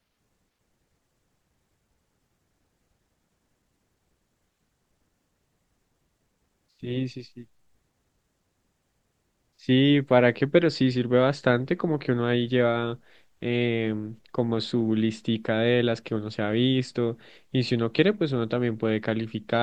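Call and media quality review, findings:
No findings in this call and media quality review.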